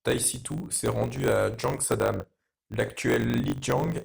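From start to finish the speech carries a steady buzz at 50 Hz, the mark of a block size mismatch (truncated). One stage hands over blocks larger than the next stage accepts, which fits 1024-sample blocks being written, and the tail of every block is discarded. Each cut leaves a discontinuity repeating at the block rate, producing the buzz, and because material is dropped the speech runs about 1.07 times fast while keeping its timbre.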